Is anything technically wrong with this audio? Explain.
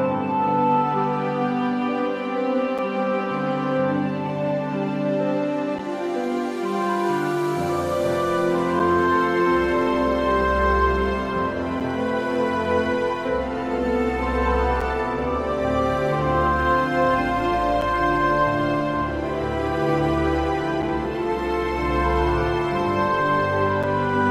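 Yes. A gap between chunks occurs at 2.78, 5.79, 8.79, 11.80, 14.81, 17.81, 20.82 and 23.83 s. The audio arrives in 3-second pieces, and each join leaves about 7 ms of silence, heard as a brief, hard-edged dropout repeating every three seconds.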